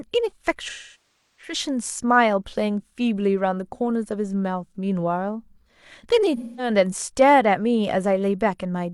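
AAC frame loss with concealment occurs from 0.69 to 1.53 s and again from 6.37 to 6.69 s. Runs of lost frames, about 0.68 s and 0.21 s, were bridged by a decoder rebuilding the last good spectrum, leaving smeared, noisy stretches in the speech.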